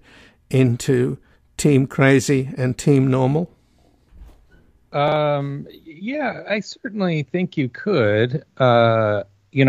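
At 5.08 to 5.16 s the speech briefly jumbles: chunks out of order, one 40 ms chunk playing one chunk late, leaving three hard joins.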